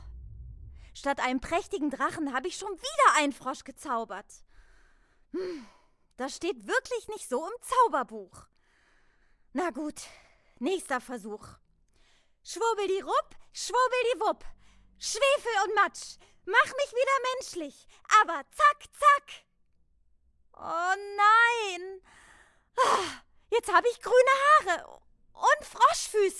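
Nothing in the audio stood out as a technical fault on listening.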